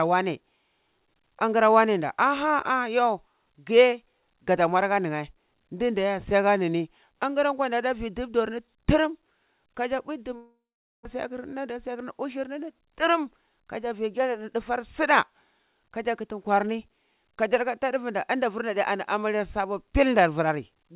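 From 10.36 s to 11.07 s the speech breaks off: the last sound smears into a fading buzz, then about 0.45 s of silence follows before the voice resumes, with a portion never heard at all. This is a long network dropout, likely caused by packets failing to arrive for roughly 0.6 s. The receiver filled the 0.69 s gap by extending and then muting, and the buffering delay grew by around 70 ms.

Right after, from 11.15 s to 12.37 s, the speech sounds slightly rushed while its pitch stays put, running at about 105% speed. This is a jitter buffer speed-up. Having built up extra delay from the dropout, the receiver trimmed many tiny slices, each a pitch period or so long, removing roughly 70 ms in total to catch back up. Throughout, the narrow telephone band of the G.711 A-law call path leaves nothing above 4 kHz.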